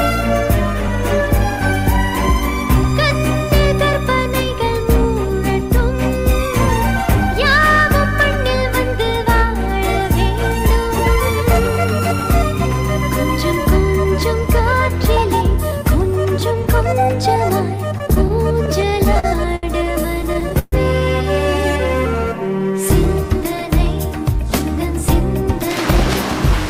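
The audio runs cleanly until 17.78 s. From there to 20.74 s it suffers repeated stalls (stutter). Packets arrived late or slower than playback consumed them, so the jitter buffer kept running dry. The receiver held up about twenty times across those three seconds. Each time it stretched the last sound to bridge the wait, fading it during the longer ones. The longest hold lasts 133 ms. Together they fill 436 ms, roughly 15% of that stretch. Nothing is lost, but the passage drags and stutters.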